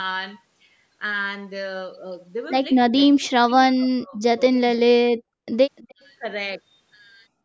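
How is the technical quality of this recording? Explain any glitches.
The recording has two kinds of call-processing glitch: repeated drop-outs of the speech in its middle section, and a faint delayed echo shortly after.

Speech suppressed in double talk occurs at 2.90–2.94, 3.13–4.22 and 4.63–5.47 s. The speech sinks deeply, by about 40 dB at worst. The likely cause is an echo canceller failing to separate its own talker from the loudspeaker echo during simultaneous talk and ducking both. Unlike packet loss, it gates the level rather than leaving clicks or robotic repeats.

An echo leak follows at 5.76–5.95 s: a quiet copy of the speech, about 30 dB down, arriving 296 ms late. The likely cause is a loudspeaker pickup that the loudspeaker side's canceller failed to remove. The fixed delay and faint repeat set it apart from room reverberation, which would blend smoothly into the original.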